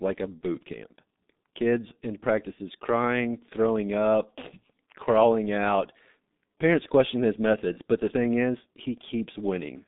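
From start to finish the speech passes through the G.723.1 codec and is heavily damaged by it. Nothing survives outside a band of roughly 150 Hz to 3.7 kHz, and the density of detail fits the 6.3 kbit/s mode. The codec models the voice in 30 ms frames at a low bitrate, so the tone comes out muffled and hoarse. Consonants are smeared because the model cannot track fast changes within each frame.

At 0.39 to 0.43 s, just after "like a", there is VoIP packet loss concealed by the speech codec. The gap fits one 30 ms frame. The decoder fills it by carrying forward its last pitch and filter settings at reduced gain, so the speech briefly turns into a weak, stretched buzzy tone or coloured noise. The same thing happens at 7.73 to 7.79 s, between "question his" and "but the thing is". Here too a single concealed frame leaves the voice thin and distorted for a short stretch before it recovers.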